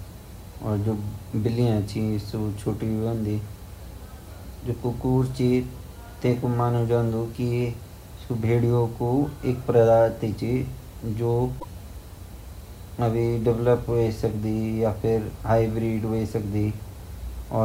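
At 11.56 to 11.64 s, damaged data in the compressed stream makes the decoder misread frames and lose sync, heard as a chirp, squawk, click or short hole.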